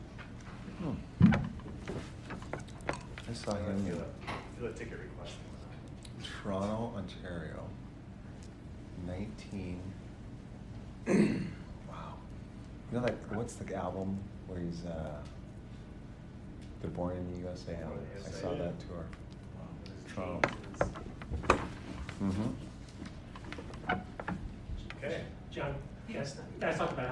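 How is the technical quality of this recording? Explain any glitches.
No technical glitches can be heard anywhere in this recording. There is nothing here that needs explaining.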